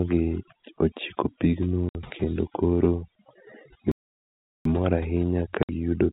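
Throughout a speech recording, the background between phrases drops to an unnatural near-silence dotted with small twinkling specks. That is overdone noise removal: a noise reducer set far too aggressively keeps shutting individual frequency bands down whenever they come close to its idea of the noise floor, so isolated bands flicker on and off as chirps, and the softer, lower-level parts of the voice get stripped out along with the hiss. Twice the sound is cut by short hard-edged holes, from 1.89 to 1.95 s and from 5.63 to 5.69 s, each 60 ms long. This is packet loss filled with silence: the receiver had nothing to play for the missing stretch and inserted digital silence, and a 60 ms gap fits the loss of two consecutive 30 ms packets each time. A much longer dropout runs from 3.92 to 4.65 s, about 0.74 s, where the audio stops mid-flow and then resumes. This playback stall points to the player likely running out of buffered data or having its audio thread blocked, leaving the output silent until it caught up. 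Throughout, the sound is limited to the narrow band below 4 kHz typical of G.711 telephone coding.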